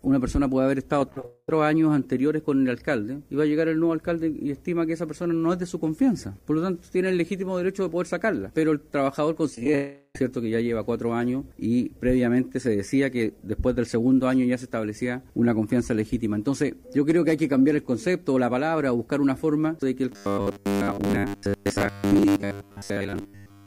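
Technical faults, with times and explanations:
0.99 to 1.25 s, repeated packet loss (robotic sound): six short gaps, the longest 37 ms, are each patched by extending the last sound, giving choppy fragments rather than one continuous hole.
1.26 to 1.49 s, long network dropout: a single longer break where continued sound fades over about 220 ms into brief silence, likely from audio not arriving; the lost part never returns.
9.55 to 9.74 s, repeated packet loss (robotic sound): five brief gaps, none longer than 17 ms, chop the sound into rapid patched pieces, a stutter rather than a sustained fade.
9.75 to 10.16 s, long network dropout: about 390 ms of audio is missing, bridged by a fading continuation and a short silence, likely a network stall, before sound resumes further on.
20.12 to 23.66 s, robotic sound from repeated short buffers: a rigid 100 Hz buzz runs through most of this stretch, likely from 10 ms chunks repeated while real audio is skipped; unlike packet loss, the buzz rate stays fixed.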